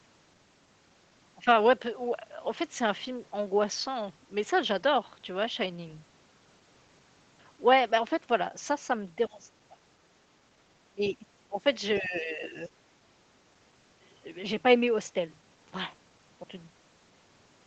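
From 9.28 to 9.50 s and 9.67 to 9.79 s the speech drops by about 20 and 25 dB. Shorter and longer dips follow at 10.58 to 10.63 s and 10.89 to 11.60 s. This is speech suppressed in double talk, likely an echo canceller attenuating the near talker while the far end was also active.

At 11.94 to 12.03 s a faint second voice, about 25 dB below the speech, is the other side's voice leaking through, likely residual loudspeaker echo the canceller missed. It coincides with a shallower suppression of about 10 dB from 11.99 to 12.60 s.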